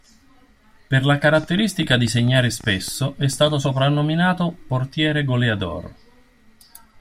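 A train of clicks runs from 1.44 to 3.51 s, ending just before "soprannominato portiere goleador": about twenty similar pulses at roughly 8.7 per second, unevenly spaced and about as loud as the speech, ticking over it. Nearby electrical interference is the likely cause.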